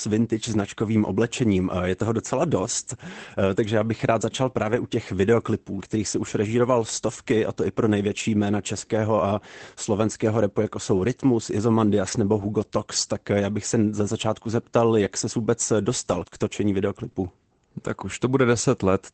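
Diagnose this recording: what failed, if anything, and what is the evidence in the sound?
Packets were lost on the network three times, and each time the packet that followed carried a low-bitrate backup copy. This is the lost packet rebuilt from error correction, Opus in-band forward error correction. The decoder played those copies instead of leaving holes, so there is no gap, but those stretches sound rougher and noisier than the surrounding coded speech. The first runs 4.63 to 4.77 s, after "já bych rád začal" and before "u těch videoklipů kterých", with about 80 ms rebuilt. The second runs 8.11 to 8.21 s, after "a to i pro" and before "jména českého a slovenského", with about 60 ms rebuilt. The third runs 12.03 to 12.13 s, also about 60 ms. Those lengths fit runs of three or four 20 ms packets. The call path is Opus at 24 kbps with an 8 kHz bandwidth.

Scattered short gaps follow from 15.05 to 17.15 s, starting after "se za začátku zeptal". 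Here individual packets went missing or arrived too late, one at a time rather than in a run. With no backup copy available, the receiver's jitter buffer covered each hole by continuing the last sound. There are roughly three such patches, the longest around 20 ms. They add up to about 70 ms, roughly 3% of that stretch. Each one is heard as a brief tick, smear or hiccup.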